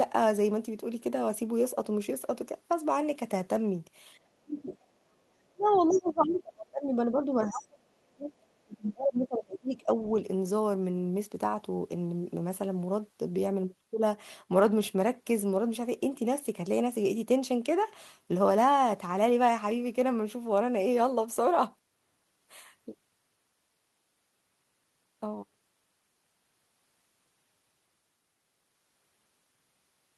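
This speech clip shows echo-canceller trouble during overlapping talk. Speech suppressed in double talk, likely from the canceller mistaking the talker for loudspeaker echo, pulls the voice down at 4.47–4.72 s by about 5 dB, then by about 35 dB at 5.46–5.66 s and through 5.89–10.1 s. The other side's voice leaking through, likely from residual echo left in the microphone signal, appears faintly at 4.73–4.85 s, most clearly at 5.63–6.09 s, and in brief scraps at 6.30–6.36 s and 7.50–7.54 s.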